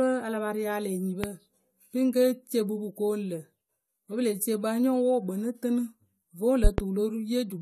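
Just after "a la pa rialǝ", a loud pop lands at 1.24 to 1.28 s, peaking about 15 dB above the speech. A second event at 6.64 to 6.82 s is a double pop, roughly 20 dB above it. Both are likely voltage pulses from a plug, switch or static discharge, riding over the speech, which continues underneath. On a waveform each pop is a tall, narrow spike. On a spectrogram each shows as a bright vertical stripe spanning all frequencies.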